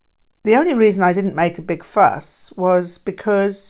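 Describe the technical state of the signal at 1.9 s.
At 1.9 s you're right in the middle of a clock drift between sender and receiver that runs through the whole clip. The sender's clock is running fast, by roughly 4 percent, so audio arrives quicker than the receiver plays it out and the jitter buffer keeps creeping toward full.

That produces the repeated timing corrections, from 0.28 s to 3.56 s. The receiver keeps snipping out short pieces to catch up, at about 104 percent effective speed, unevenly spaced. You hear it as small hiccups and a slightly rushed, unsteady pace, on top of the 4 kHz narrowband call sound.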